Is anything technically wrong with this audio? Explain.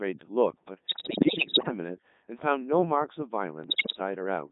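Yes. Throughout, the speech sounds robotic and buzzy, thin, and confined to roughly 150 Hz to 3.7 kHz, with heavy damage to its natural texture. This is the Codec 2 vocoder, a digital-radio codec, and the sound fits its highest 3.2 kbit/s mode. Instead of keeping the waveform, it sends only pitch, voicing, energy and a coarse spectral shape, then rebuilds the speech from sine waves at the receiver.

From 0.87 to 1.71 s, and again from 3.64 to 3.99 s, the speech breaks into warbling, bleeping gibberish, with sudden jumps in pitch, loudness and tone colour. These are bit errors on digital voice radio, at around one bit in ten. At such a low rate, every bit helps set the pitch, level, voicing or spectrum of a whole frame, so each flipped bit makes the decoder synthesise the wrong sound.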